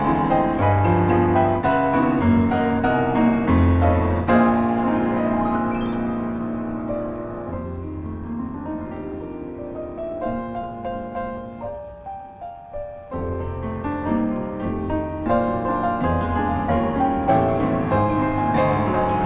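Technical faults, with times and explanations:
No technical faults are audible; the signal stays continuous throughout, with nothing interrupting or disturbing it at any point.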